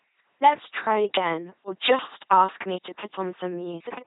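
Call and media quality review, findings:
Buzzy, mechanical robotic speech throughout, nothing above 3.9 kHz. LPC-10 vocoder, consistent with 2.4 kbit/s. Ten-pole filter driven by pulses or noise; voicing errors give buzz and hiss.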